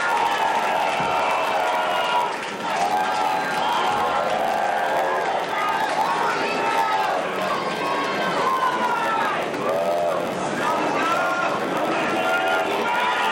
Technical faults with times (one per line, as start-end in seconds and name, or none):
0.00-13.31 block size mismatch (padded)